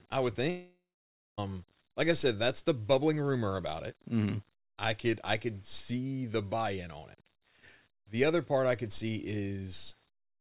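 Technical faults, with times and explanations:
throughout, low bit depth without dither: A grainy distortion rides on the speech and changes with it, roughest on quiet syllables and decays, where low-level detail breaks up or sputters. The likely cause is a signal rounded to very few levels, which fits about 9 bits, with no dither to decorrelate the error. The error therefore tracks the waveform rather than forming a steady hiss. It sits roughly 35 dB below the signal, inside a band that already stops at 4 kHz from the G.711 call path.
0.50 to 1.39 s, long network dropout: The audio is interrupted for about 0.88 s. It first continues as a synthetic buzz or hiss derived from the last sound, which fades out, and then there is roughly 0.55 s of silence. This is the likely result of no packets arriving for that stretch, so the receiver's concealment extrapolated what it last had before giving up. 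The speech then resumes further on, and the portion spoken during the gap is lost.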